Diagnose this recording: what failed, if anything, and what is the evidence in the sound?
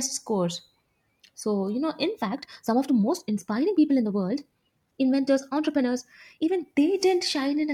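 Right after "you know", at 2.09 s, the speech suddenly hurries and stays rushed until 6.65 s, running about 1.44 times faster with no rise in pitch. That's a time-stretched section, likely done in software before storage to squeeze the passage into a shorter slot. The stretcher keeps the pitch by dropping short slices of the waveform instead of resampling, so the passage sounds rushed while the pitch holds steady.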